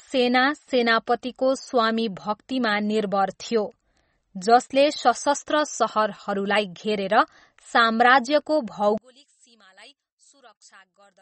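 Throughout, MP3 compression, likely at a starved bitrate near 32 kbps, discards everything above 8.4 kHz, leaving the speech dull, watery and swirly. From 8.98 s to the end, one channel inverted is the likely cause: reversed polarity cancels the shared centre in mono, dropping the speech about 26 dB to a faint trace.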